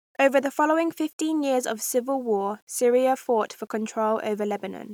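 Low bit depth without dither runs through the whole speech clip, from start to finish. The audio was likely reduced to about 9 bits and rounded to the nearest step with no dither added, so the error tracks the waveform instead of forming a steady hiss. That error sits only about 40 dB below the signal, giving a grainy, rasping edge that shifts with the sound, worst on quiet tails, which turn gritty.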